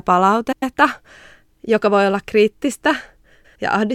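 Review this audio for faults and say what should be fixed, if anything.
Frames out of order at 0.52–0.73 s and 3.34–3.56 s, the second right after "joka voi olla kriittistä". Two neighbouring blocks of about 105 ms each play swapped, which fits runs of four frames. You get a garbled flutter. Reorder packets by sequence number before decoding to prevent it.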